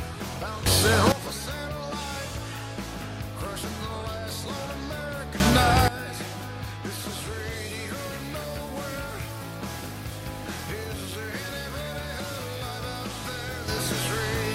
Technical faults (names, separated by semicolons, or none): sudden gain jump